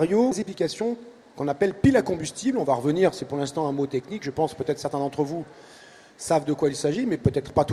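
A skip ahead occurs at 0.31 s: about one and a half seconds of audio is missing, and playback jumps straight to later material with no gap or fill, so the two sides of the cut are joined almost directly. This fits a stretch dropped in transit or discarded by the jitter buffer on overflow while later audio was already queued. Immediately after, from 0.43 s to 1.63 s, a jitter buffer speed-up runs the audio at 109% speed with unchanged pitch, which sounds hurried. The receiver is trimming short pitch-period-sized pieces in quick succession, removing about a tenth of a second in total, to bring an overfilled buffer back toward its target delay.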